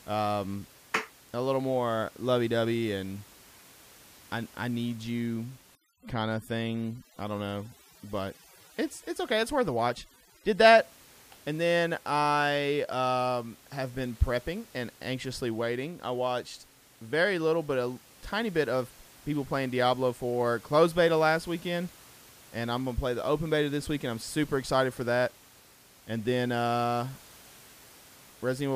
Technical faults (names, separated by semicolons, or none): overdone noise removal